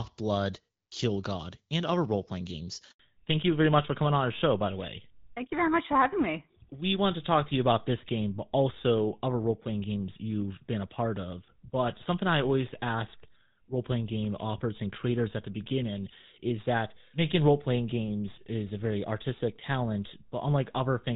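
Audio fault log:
2.91–2.99 s, handover gap: right after "other role playing games" the sound dies away and stays silent for 80 ms while the call switches networks and no frames arrive. What is said then is lost, and the gap is followed by a change in tone, which sets it apart from ordinary packet loss.
2.99 s to end, fallback to narrowband: from the handover on, nothing above 4 kHz passes. The call has dropped from HD Voice, clear before this point at what sounds like 12.65 kbit/s AMR-WB, to an older narrowband codec, likely GSM full rate, so the voice turns duller and rougher. Unlike a brief glitch, the lost top end never returns.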